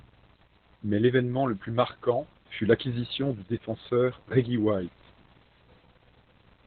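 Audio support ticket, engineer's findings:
Muffled, hoarse, slightly robotic speech throughout; nothing above 4.3 kHz. Opus voice compression, SILK narrowband mode, coarse excitation coding; heavy damage fits roughly 8 kbps.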